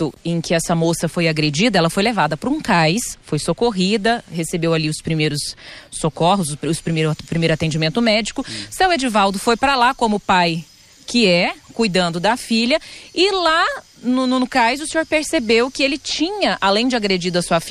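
Nothing in the recording stood out as a technical problem on listening.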